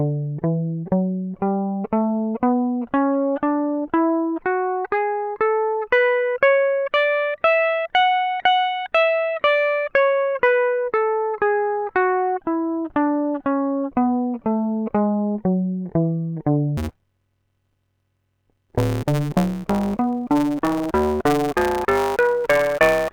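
Music, which from 16.77 s to the end at 23.13 s shows a block size mismatch (truncated). Block tails are discarded, consistent with 512-sample writes, producing a 150 Hz buzz and 1.6x faster playback at normal pitch. A spectrogram shows vertical striping every 6.7 ms, and the waveform shows regular splice discontinuities.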